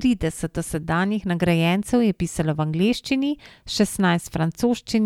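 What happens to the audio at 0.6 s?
Nothing goes wrong at 0.6 s; the speech there plays through intact, with no dropout, glitch or distortion.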